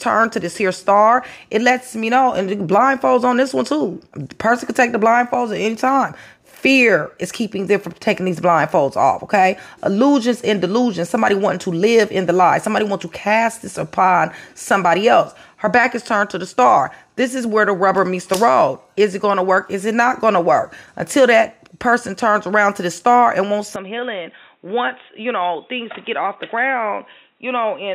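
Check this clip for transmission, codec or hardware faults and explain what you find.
One fault turns up. From 23.76 s to the end, everything above 3.8 kHz vanishes, the level drops a few decibels and faint new background noise appears, likely an input switched to a poorer device. A codec bandwidth drop would not also change the noise and level.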